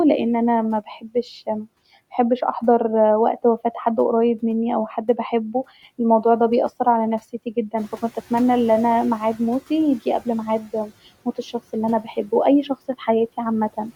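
At 1.01 to 1.15 s, just after "لان انا", speech is cut by the noise suppressor. It mistakes roughly a tenth of a second of speech for noise and pulls it down by about 19 dB, so that stretch sounds swallowed.

From 7.77 to 9.97 s, after "الموضوع ده بيأثر عليا", the room noise jumps by about 12 dB around 8 s and the noise suppressor is catching up. Its noise estimate lags, so the new background first comes through with little reduction, then sinks by about 10 dB over 2.2 s as the estimate adapts.

At 10.63 to 10.91 s, just before "موت الشخص الي انا", speech is cut by the noise suppressor again, with a shallower dip of about 8 dB that leaves the sound faint.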